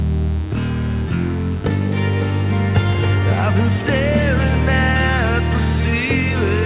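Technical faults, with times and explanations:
Throughout, mains buzz: spikes from a dimmer, rectifier or poorly shielded line have entered the signal twice in every 50 Hz mains cycle, so the interference arrives as a dense stack of 50 Hz harmonics instead of a clean hum. It sits roughly 25 dB under the wanted audio as a steady, raspy buzz. Because the call path cuts everything above 4 kHz, consistent with a narrowband telephone codec, the buzz's upper harmonics stop there too.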